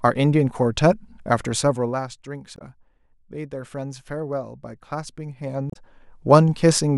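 A speech recording in which a fine ticking, zipping texture rides on the voice from 1.61 to 2.08 s while the level falls by roughly 15 dB. This is zipper noise: the gain is moved in coarse, unsmoothed steps, about 100 per second here, and each jump leaves a tiny click. Two short glitches, at 2.55 to 2.62 s and 5.68 to 5.77 s, come from damaged data in a compressed stream, where corrupted frames make the decoder lose sync and jump to the next frame header.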